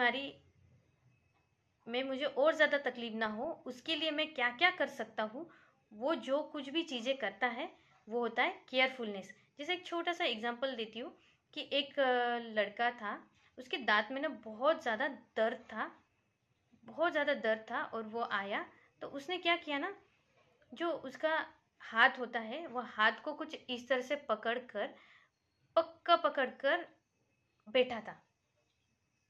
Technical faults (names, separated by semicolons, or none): DAB burbling